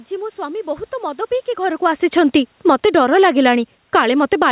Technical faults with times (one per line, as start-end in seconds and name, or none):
1.57-3.04 automatic gain falling
3.79-4.51 automatic gain falling